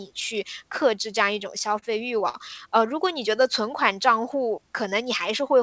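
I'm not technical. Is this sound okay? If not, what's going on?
No. Between about 1.4 and 2.37 s the speech stutters: it catches and drags seven times in quick succession, with the longest hitch about 50 ms. These are repeated stalls (stutter). Parts of the call audio arrived late, so the receiving end kept running out of sound to play. Each time, it stretched the last bit of sound to cover the wait, about 125 ms in all, so nothing is lost, but the flow stumbles. The call path sounds slightly muffled, with nothing above 8 kHz.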